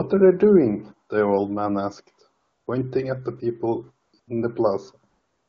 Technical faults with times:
2.41-2.67 AMR comfort noise
4.05-4.27 AMR comfort noise
5.09-5.49 AMR comfort noise

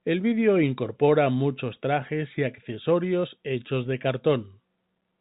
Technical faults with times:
none

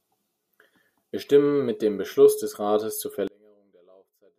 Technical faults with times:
3.27-4.39 one channel inverted

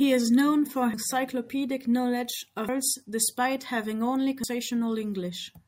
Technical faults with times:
0.94 audio missing between chunks
2.69 audio missing between chunks
4.44 audio missing between chunks

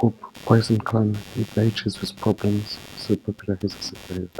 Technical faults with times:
0.00-4.39 computer activity noise

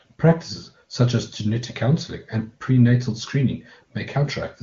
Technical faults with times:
none

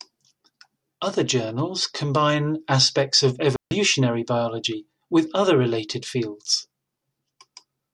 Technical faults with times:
3.56-3.71 digital wireless dropout

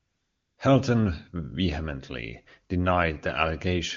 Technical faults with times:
0.00-0.57 AMR comfort noise

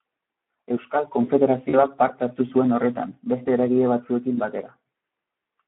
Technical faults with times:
0.00-5.67 Speex codec
1.69-1.83 VoIP packet loss concealed by the speech codec
4.35-4.40 VoIP packet loss concealed by the speech codec

